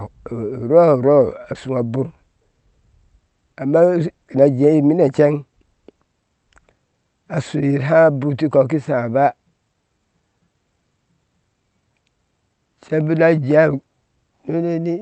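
Nothing stood out on listening to this speech, which comes across with the band-limited top end, reaching to about 8 kHz, that fits an Opus call path.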